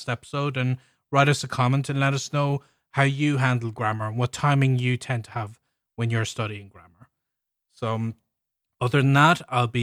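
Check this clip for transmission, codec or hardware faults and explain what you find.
Nothing in this clip points to a fault.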